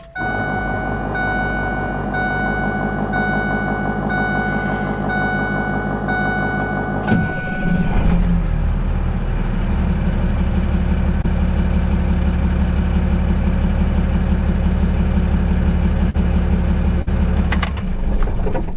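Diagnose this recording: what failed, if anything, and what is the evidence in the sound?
The failure is in the network stage, handled by the receiver's jitter buffer. The audio is band-limited with nothing above 4 kHz, which fits G.711 A-law at 64 kbps. Two short concealed packet losses occur. At 11.22 s a gap of about 20 ms is patched with 15 ms of synthesised fill. At 16.10 s to 16.16 s, 40 ms goes missing and 40 ms is filled. Each one is heard as a brief smear or wobble. The decoder extends the last sound and then blends back into real audio.

At 17.02 s to 17.09 s there is a burst of packet loss. Here 40 ms of audio is missing, and 47 ms of concealment covers it. The receiver keeps repeating the last sound and turns it down as the gap runs on. This gives a held buzz or fading hiss. The audio then resumes further along, with the lost stretch gone. It is longer than the first loss and as long as the second.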